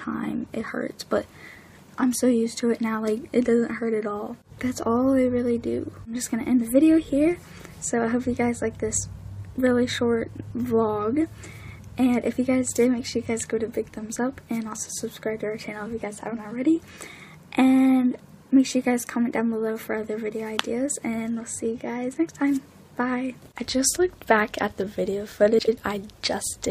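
Frames out of order three times: adjacent runs of coded frames arrived swapped and were decoded in that sequence, so a short stretch plays with its two halves exchanged. At 11.63 to 11.73 s the swapped blocks are about 46 ms each, at 23.42 to 23.47 s about 23 ms, and at 25.58 to 25.78 s about 93 ms. Each one is a brief garbled flutter, and no time goes missing.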